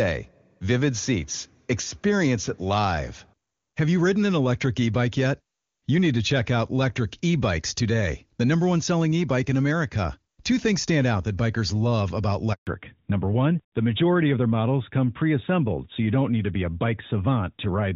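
A handover gap opens at 12.53 s, just after "that bikers love about," and lasts 140 ms, until 12.67 s. The call was passed from one network link to another, and no speech frames came through during the switch. The sound drops away within a few tens of milliseconds, leaving a short dead silence, and whatever was said in that window is gone for good rather than delayed.

A fallback to narrowband follows immediately, from 12.67 s to the end of the clip. Up to that point the HD Voice wideband codec carries the speech cleanly, at a quality that fits its top rate of around 23.85 kbit/s. After the handover the call continues on an older narrowband codec, whose sound fits AMR-NB at 12.2 kbit/s. Nothing above 4 kHz survives, so the voice suddenly turns duller, boxier and rougher.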